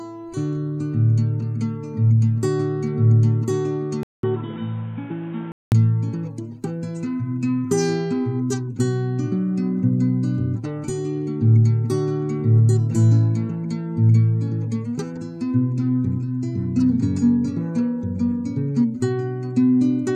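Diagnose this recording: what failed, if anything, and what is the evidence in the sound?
At 4.03 s the sound drops out for about 200 ms. From there to 5.72 s it turns dull and boxy, with nothing above 3.8 kHz. It is also a few dB quieter and carries a new noise floor around 30 dB down. This points to the capture device rather than the codec. The likely cause is an input switched to a poorer device, such as a headset's call profile. That device passes a narrower band and has its own tone, level and hiss.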